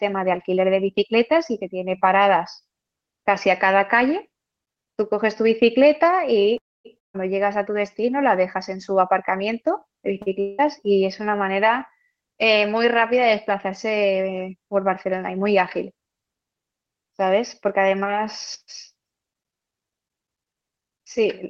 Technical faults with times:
6.57-6.87 call audio freeze
6.99-7.16 long network dropout
10.22-10.28 short stall from a late packet
10.40-10.60 long network dropout
19.08-21.42 jitter buffer speed-up

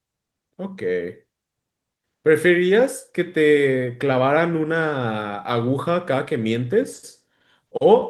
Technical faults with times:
none

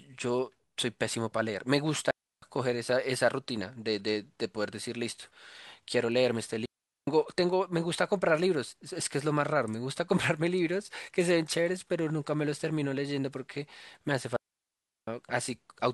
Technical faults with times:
2.11-2.42 digital wireless dropout
6.65-7.07 digital wireless dropout
14.36-15.08 digital wireless dropout

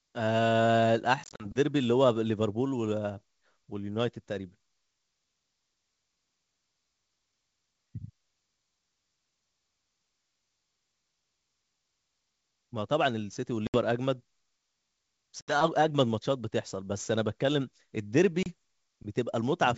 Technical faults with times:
1.24-1.46 packet loss on an ADPCM call
13.67-13.77 packet loss on an ADPCM call
15.41-15.56 packet loss on an ADPCM call
18.43-18.47 packet loss on an ADPCM call

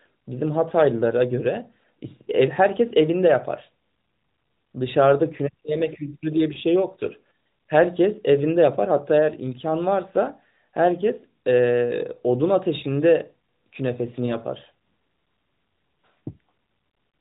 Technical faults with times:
6.54-6.58 lost AMR speech frames
14.26-14.36 lost AMR speech frames

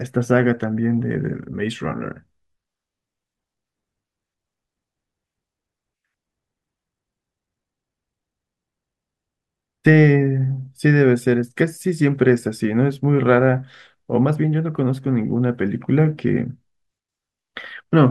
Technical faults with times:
none

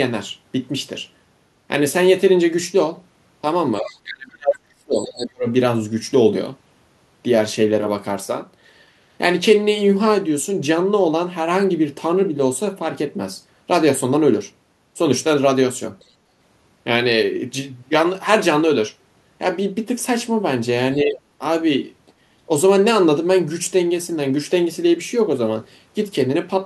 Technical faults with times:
3.77-3.93 other side's voice leaking through
3.79-5.47 speech suppressed in double talk
4.98-5.26 other side's voice leaking through
15.99-16.05 other side's voice leaking through
21.04-21.18 speech suppressed in double talk
22.07-22.12 other side's voice leaking through

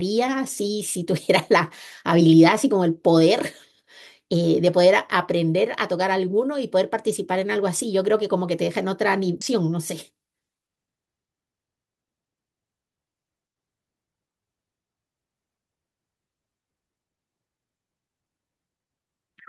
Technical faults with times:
9.41 skip ahead
9.53-10.70 jitter buffer speed-up

